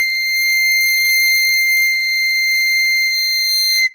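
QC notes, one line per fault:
No faults heard in this music.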